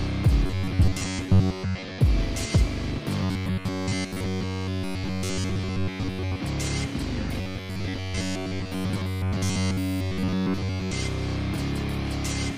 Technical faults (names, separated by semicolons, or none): robotic sound from repeated short buffers